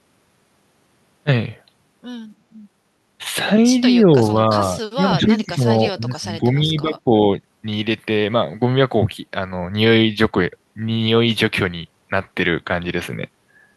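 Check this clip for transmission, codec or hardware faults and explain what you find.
The speech shows one fault, heard twice: speech suppressed in double talk. From 3.99 to 4.34 s the level sags slightly, by about 5 dB. From 4.95 to 7.13 s it drops harder, by about 15 dB, and is pulled down for around one and a half seconds in total. The likely cause is an echo canceller that cannot separate the near-end talker from the overlapping far-end echo and attenuates both.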